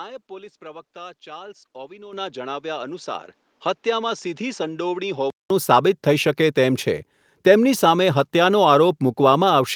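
From the start until 5.5 s the speech sounds dull and boxy, with a narrower band, a background noise roughly 40 dB under the voice, and a level about 5 dB lower. This is likely an input switched to a poorer device. A change of tone and bandwidth, rather than of loudness alone, separates it from a gain change.

At 2.13 s the microphone volume stepped up by 10 dB, and at 3.15 s by another 4 dB. Voice and background jump together at each instant while the tone stays exactly the same, which marks these as input-volume steps rather than a device change.

At 5.5 s, after a silence of about 200 ms, the sound clears up and the band opens out to around 12 kHz. That ceiling fits the Opus call path, consistent with a bitrate near 40 kbps.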